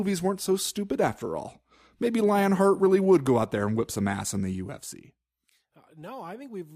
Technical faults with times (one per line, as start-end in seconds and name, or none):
4.35-5.86 zipper noise